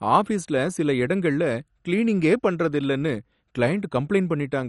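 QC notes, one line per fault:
Throughout: MP2 compression, likely at a low bitrate near 48 kbps, starved the sub-bands of bits, so everything above 11.3 kHz is gone and the remaining bands are coarsely quantised, making the speech sound dull with a plainly audible gurgling, granular texture.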